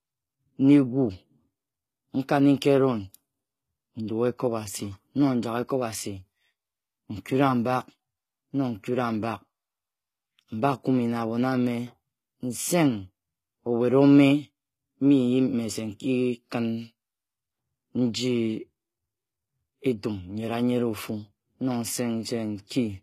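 Speech throughout shows HE-AAC compression: treble sounds gritty and lispy, likely from band replication at roughly 20 kbps, and a spectrogram shows nothing above 14.9 kHz.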